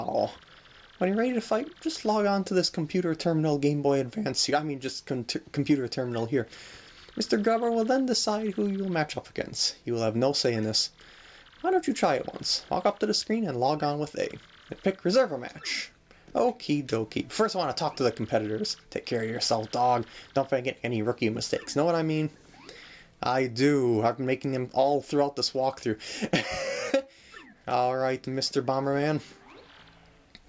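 No technical faults are audible.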